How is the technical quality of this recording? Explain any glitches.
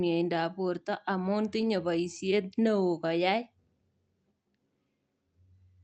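The recording has one timing glitch. The call codec's band tops out near 8 kHz, with nothing above that on a spectrogram.

From 2.79 to 3.37 s there is a jitter buffer slow-down. The receiver was short of buffered audio, so it repeated single pitch periods back to back, stretching the passage by 43 ms and playing it at about 94% speed without changing pitch. Sounds drag slightly. On a spectrogram, harmonics stay level while features widen in time. The waveform shows near-identical adjacent cycles.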